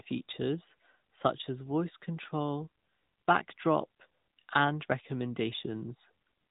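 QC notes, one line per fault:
Throughout, AMR narrowband mobile codec. Speech stops dead at 4 kHz and sounds plainly buzzy and synthetic, which fits a mid-rate mode near 10 kbps.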